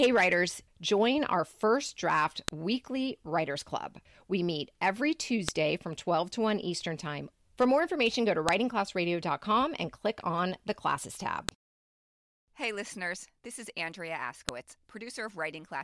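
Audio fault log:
2.48, 5.49, 8.49, 11.49 and 14.49 s: file header played as audio. A sharp, loud click lands every 3 s, after "meet every", "more information go to" and "on the classes tab", because the audio was joined from 3-second pieces whose header bytes were left in and played as samples. On the waveform each click is a lone spike about 1 ms wide. On the spectrogram it is a thin vertical line across all frequencies.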